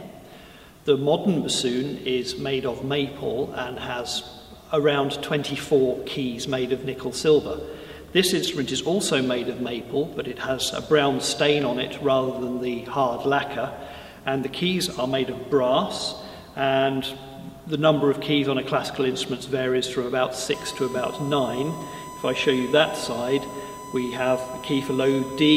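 From 20.54 s to the end at 25.56 s, a steady fixed-pitch whine at 1 kHz sits around 15 dB below the audio. This is USB whine: the bus's 1 ms frame timing draws current in pulses that leak into the signal through power or ground.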